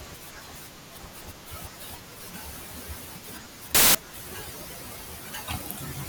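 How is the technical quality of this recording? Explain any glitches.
The recording has one clear glitch, from 3.75 to 3.95 s, where the speech gives way to a burst of loud, harsh broadband noise for about 0.2 s. This is samples built from the wrong bytes: for that stretch the decoder assembled each sample from misaligned or reversed bytes, so the rapidly fluctuating low-order bits landed in the most significant position. The result is a harsh hiss that swamps the signal.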